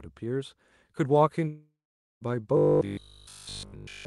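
Speech that passed through an Opus call path, with its coding band topping out near 12 kHz. From 1.47 s to 2.23 s the sound breaks off in a long network dropout. The last sound is stretched into a fading buzz. Then about half a second of near silence follows. When the speech returns, roughly three quarters of a second of it is simply gone. That points to a likely run of lost packets. From 2.57 s to 4.05 s the speech turns into robotic sound from repeated short buffers. A rigid, metallic buzz sits at 50 Hz. That pitch matches a 20 ms slice being replayed over and over. Nearly all of this stretch is repeats, not fresh audio. The likely cause is audio arriving too seldom for playback to keep up.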